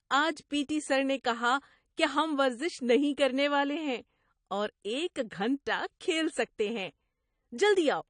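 From start to end the speech carries plainly audible AAC compression damage, likely from AAC-LC coding at a low rate, which fits about 32 kbps. With so few bits, the encoder drops the upper band and starves quieter spectral detail, so sibilants turn fizzy, vowels sound dull and smeared, and sustained sounds warble. A spectrogram would show a hard ceiling well below the normal top, with patchy holes and blocky, flickering energy beneath it.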